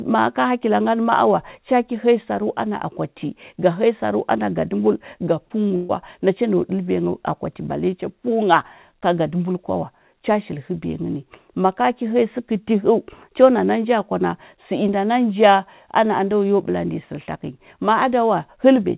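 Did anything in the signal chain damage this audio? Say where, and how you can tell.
Yes, both problems come from the network stage. Right after "saru ana gadəmbul ga", the speech smears into a brief wobble from 5.46 to 5.52 s, and a shorter one follows at 5.68 to 5.72 s. This is short concealed packet loss. About 40 ms and then 20 ms of audio never arrived in time, so the decoder extended the preceding sound from its pitch or noise and blended back into real audio. The 4 kHz band limit heard throughout fits a 64 kbps G.711 mu-law call path.

From 5.76 to 5.91 s the sound turns into a held, fading continuation of the last sound and never drops to silence, then picks up at "nacha nau" with roughly 140 ms of speech skipped. This is a burst of packet loss, where several consecutive packets were lost or arrived too late. Concealment stretched the last sound across about 130 ms, turning it down as the gap lengthened, and playback resumed at the next packet that arrived.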